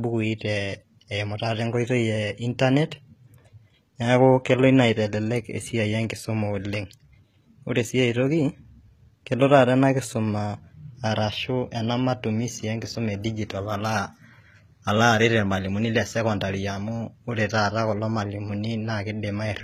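Throughout the speech, the s sounds come out gritty and metallic, and nothing reaches above about 14.9 kHz. This is likely HE-AAC compression at a low bitrate, around 20 kbps. The codec rebuilds the upper band from copied lower bands, so its harmonics fail to line up with the real ones.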